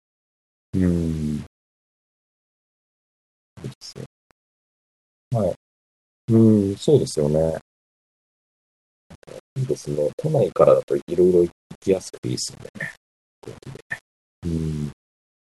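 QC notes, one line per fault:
Throughout, low bit depth without dither: the speech carries a grainy distortion that rises and falls with it, quiet tails turning gritty and sputtering, likely from rounding to about 7 bits with no dither, leaving error tied to the signal roughly 30 dB down.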